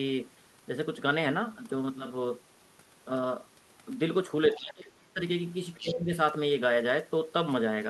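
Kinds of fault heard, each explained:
Speech suppressed in double talk: the talker's speech drops sharply from 4.57 to 5.2 s, by roughly 25 dB at its deepest, then dips again, more shallowly, around 5.81 to 6.12 s. Both drops coincide with the other side talking, which likely made the echo canceller duck everything rather than separate the two voices. This differs from a plain level fade because the loss tracks the overlap.
Other side's voice leaking through: a short scrap of a second voice, about 15 dB below the talker, is heard from 5.74 to 5.92 s, likely loudspeaker echo the canceller failed to remove. Unlike suppression, this adds sound rather than taking it away, and it overlaps the second dip.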